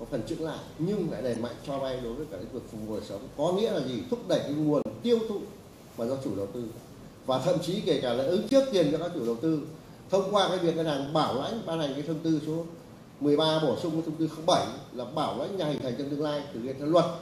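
Damaged data in a compressed stream causes brief glitches at 1.34–1.37, 4.82–4.86, 8.49–8.52, 11.07 and 15.78–15.81 s. Corrupted frames break decoder sync.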